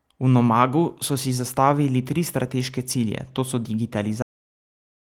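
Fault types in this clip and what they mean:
Cut-off end: speech stops abruptly mid-sound at 4.22 s, dropping straight to flat digital silence with no decay tail; the waveform ends in a hard vertical edge.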